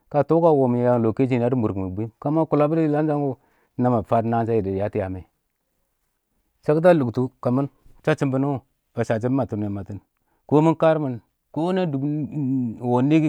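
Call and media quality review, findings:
No audible faults found on review of the speech; nothing to attribute to any component in the call or media path.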